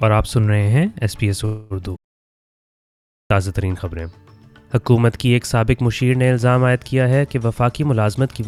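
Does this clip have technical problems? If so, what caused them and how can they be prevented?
Yes, there are three faults.

From 1.45 to 1.73 s there is a call audio freeze. The sound does not drop out. Instead, the last fragment is stretched into a fading buzz for about 250 ms, and then the audio resumes where it left off. Nothing is lost, but everything afterwards arrives about 250 ms later. This is likely caused by packets held up in the network until the jitter buffer ran dry. A larger or adaptive jitter buffer and a less congested network path would prevent it.

From 1.96 to 3.30 s there is a playback stall. The output goes completely silent for about 1.34 s, in the middle of the sound, and then continues. Unlike the freeze, nothing is synthesised to cover the gap. The player simply had nothing to render. The likely cause is that the player's data supply ran out or its audio thread was blocked. 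Deeper playback buffering and keeping blocking work off the audio thread would prevent it.

From 7.62 to 8.47 s there is a jitter buffer speed-up. The audio runs at about 115% speed with its pitch unchanged, so it sounds hurried. Over that stretch, around 150 ms of material is cut out in many small pitch-period pieces. The receiver was shedding the extra delay that had built up after the earlier disruptions. Gentler, slower buffer adaptation, or avoiding the delay build-up in the first place, would prevent it.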